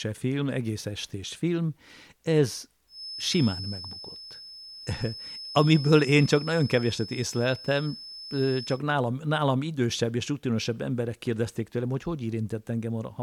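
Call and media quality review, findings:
Feedback whistle, 2.86 to 8.83 s, after "egész estés film ez", clearing before "nálam nálam idősebb és". Thin steady tone at 5.2 kHz, about 15 dB under the speech, level swelling and fading slowly. Likely cause: loudspeaker-to-microphone loop sitting at the edge of oscillation, sustaining one frequency without building up. Spectrogram: a single narrow horizontal line at 5.2 kHz across those six seconds. Waveform: a faint high-frequency fill between syllables.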